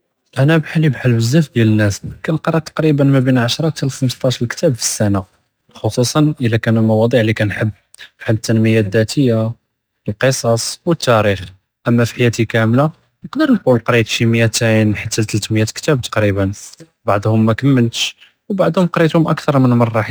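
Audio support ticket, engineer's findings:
Crude rate conversion, throughout the speech: gritty inharmonic fizz riding loud and bright syllables, roughly 30 dB under the signal. Fits 48 kHz to 44.1 kHz by sample dropping. Unlike codec swirl, the fizz stays steady and tracks level, not bitrate.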